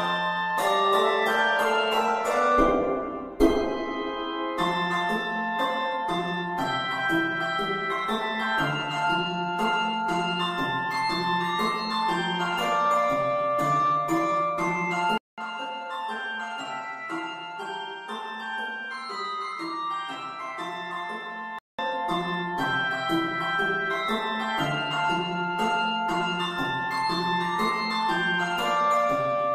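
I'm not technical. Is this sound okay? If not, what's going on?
No. From 15.18 to 21.79 s there is likely an input switched to a poorer device. After a 0.2 s gap, the sound turns duller and a bit quieter, with faint new background noise, as though another microphone took over. It then clears up again.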